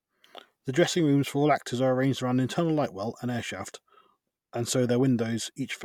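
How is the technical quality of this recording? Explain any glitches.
No glitches can be heard anywhere in this recording. The speech carries on without any technical disturbance.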